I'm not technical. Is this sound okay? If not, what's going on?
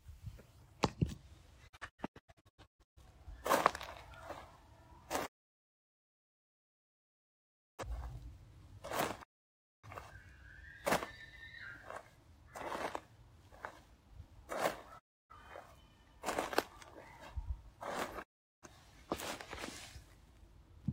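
No. The sound keeps dropping out: a digital broadcast dropout, where the receiver loses the signal and mutes. It fades quickly to clean silence, with no hiss or crackle as weak analogue reception would have, at 1.67–3.01 s (several short holes), 5.25–7.84 s, 9.22–9.88 s, 14.98–15.35 s and 18.22–18.67 s.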